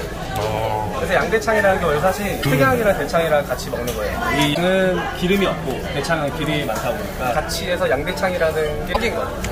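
Damaged data in a compressed stream is the fault here: stretches of the encoded file were corrupted, so the decoder misreads those frames, loses its place, and has to hunt for the next valid frame header before playback can resume normally. Each episode is heard as a chirp, squawk, click or short hole breaking into the audio, lasting roughly 70 ms, at 2.39 to 2.46 s, 4.51 to 4.58 s and 8.90 to 8.97 s.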